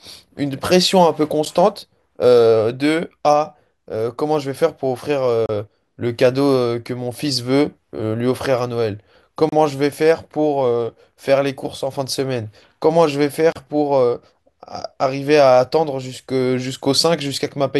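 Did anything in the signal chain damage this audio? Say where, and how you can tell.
Yes, at the codec stage. Gaps at a join of encoded pieces open at 1.45, 5.46, 9.49 and 13.52 s, every 4 s. Untrimmed encoder delay and padding leave silence.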